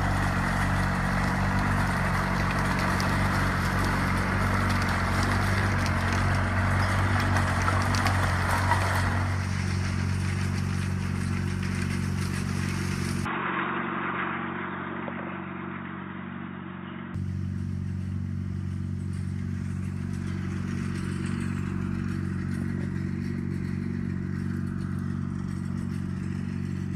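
From 13.25 s to 17.15 s the sound abruptly goes dull and boxy, with nothing left above about 3.8 kHz. That's the signature of an input switched to a poorer device, most likely another mic or a headset's call profile taking over mid-recording. The cut is instant with no gap, the level shifts by roughly 5 dB, and a faint new noise floor sits well under the signal. At 17.15 s the full bandwidth snaps back.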